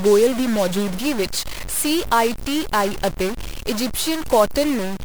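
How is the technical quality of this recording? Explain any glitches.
Quality is poor: a harsh distortion runs through the whole clip. The fault is a stuck bit, likely from a broken data line or converter, so roughly half the samples are shifted by a fixed step of around -25 dBFS. It sounds buzzy and gritty, and the pauses between speech fill with noise. On a waveform this shows as square-edged offsets. A spectrogram shows broadband smear that continues through the gaps.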